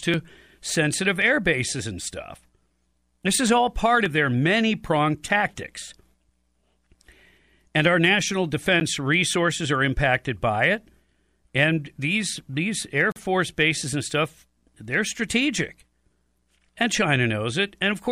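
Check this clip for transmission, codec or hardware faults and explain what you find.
Two dropouts turn up in this speech, both a block of digital silence. The first, at 8.8 s, is only 10 ms long, so it comes across as a quick tick. The second runs from 13.12 to 13.16 s, and at 40 ms it's long enough to hear as a tiny hole. In both cases a run of samples got replaced by zeros, so the signal drops straight to nothing and snaps back with no fade.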